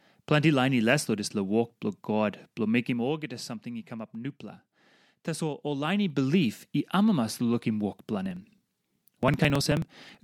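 Just after "walk blo god blo", from 2.8 to 3.16 s, zipper noise appears. The level drops by about ten dB in coarse steps, roughly a hundred per second, with no smoothing. Each step clicks, so a fine zipping rides on the sound.

From 8.26 s to 10.2 s come periodic USB or driver dropouts. Every 54 ms, a short slice of audio, roughly ten milliseconds, is skipped outright. The gaps are evenly spaced. They are heard as a steady train of ticks.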